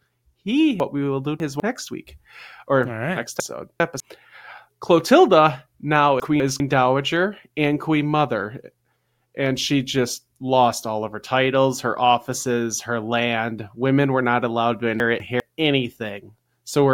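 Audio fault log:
0.8–1.6 s, chunks out of order: a 200 ms chunk plays three chunks late, so the sound jumbles at three hard joins.
3.4–4.0 s, chunks out of order: a 200 ms chunk lands two chunks late, swapping sound briefly.
6.2–6.6 s, chunks out of order: two adjacent 200 ms chunks are swapped, a short garbled skip.
15.0–15.4 s, chunks out of order: the same single-chunk swap recurs, nothing lost but briefly scrambled.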